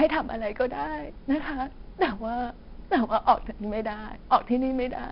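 Throughout, a gritty hiss clings to the loud speech and sharp attacks distort, with nothing above 5.4 kHz. This is heavy 4-bit ADPCM compression, consistent with roughly 44 kbps.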